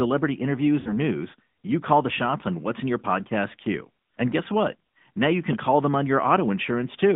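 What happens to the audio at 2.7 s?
At 2.7 s the speech carries the same AMR narrowband mobile codec coloration heard across the whole clip. The band is confined to about 150 Hz to 3.6 kHz, and the vocal-tract model driven by sparse pulses adds an audible buzzy, synthetic edge, which fits a 10.2 kbps mode.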